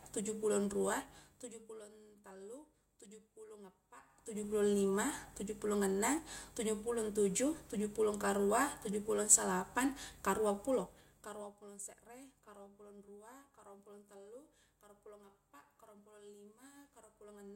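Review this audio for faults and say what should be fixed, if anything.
Ticking at 0.85–1.88 s after "tuju pulon" and 4.01–4.52 s after "tallu tuju pulong" is zipper noise: gain jumping in unsmoothed 2 dB, then 3 dB, steps about ten times a second. Interpolate gain changes per sample so the level glides instead of stepping.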